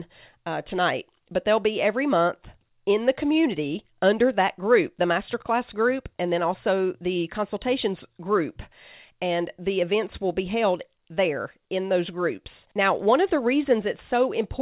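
No faults are heard in this speech, which is band-limited with nothing above 4 kHz, consistent with a G.711 mu-law call path at 64 kbps.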